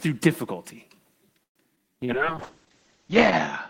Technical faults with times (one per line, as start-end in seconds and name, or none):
1.43-1.58 call audio freeze
1.75-1.80 skip ahead
1.79-3.05 jitter buffer slow-down
2.05-2.11 short concealed packet loss
2.15-3.70 call bitrate drop